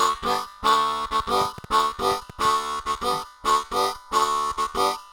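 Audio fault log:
1.42–2.46 s: train of clicks, about seven similar pops at an uneven 5.8 per second, peaking roughly 5 dB above the sound, likely from equipment interference or a faulty connection.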